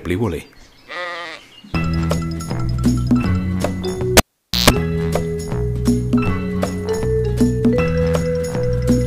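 At 4.17 s a cable is pulled and plugged in: a pop, then about 479 ms of near silence, a 142 ms burst of 60 Hz mains buzz as only the tip touches, and a second pop at 4.7 s. The hum burst separates it from a plain dropout.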